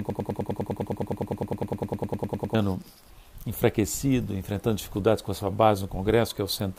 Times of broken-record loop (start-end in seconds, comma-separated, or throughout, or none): 0.00-2.55